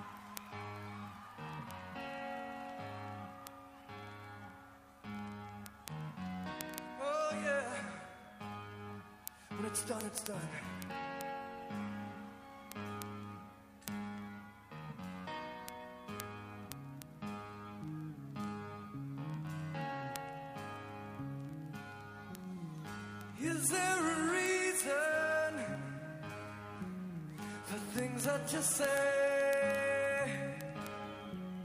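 From about 0.12 s right to the end there are word clock ticks: sharp, uneven clicks roughly every 40 ms, hundreds in all. The receiver isn't locked to the sender's clock, and with a mismatch of roughly 500 ppm a single sample gets dropped or repeated at each slip.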